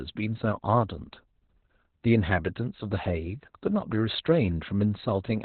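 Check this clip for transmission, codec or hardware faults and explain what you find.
There's one fault, and it runs the whole way through: Opus voice compression at a very low rate. From start to finish the speech sits in a narrowband channel with nothing above about 4.3 kHz, so it comes across muffled and boxy. The coarse linear-prediction coding of the excitation makes it hoarse and a bit robotic. That's the SILK coder squeezed hard, and the damage is heavy enough to fit a bitrate around 8 kbps.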